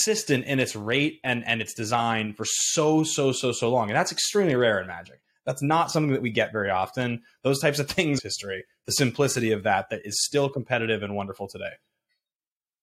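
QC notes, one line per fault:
8.18–8.20 s, stream segment skipped: the speech jumps abruptly forward with a brief blip, likely a lost segment; unlike a dropout, no silence, the material is simply missing.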